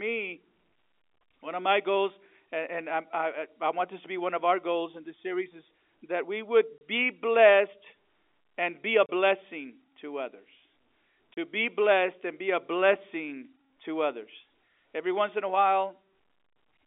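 At 6.78 s, 9.06 s and 11.34 s, the speech drops out for 30 ms each time. This is packet loss filled with silence. A block of audio never arrived, and the receiver played nothing in its place. Each gap's length points to a single lost packet of about 30 ms. The holes have hard edges where the sound cuts off and returns. The telephone-band G.711 coding carries the speech around these gaps.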